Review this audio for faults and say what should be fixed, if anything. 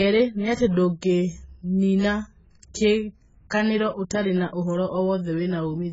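The speech is band-limited throughout, with nothing above 7.7 kHz, and sounds dull and smeared, with a warbling, fizzy texture on sustained vowels and sibilants. This is likely AAC compression at a very low bitrate. The encoder lowered its cut-off and quantised the remaining spectrum so coarsely that bands were left empty or filled with substitute noise. The heavy damage fits an AAC-LC stream of around 12 kbps. Encode at a higher bitrate, or keep a lossless master and compress only for final delivery.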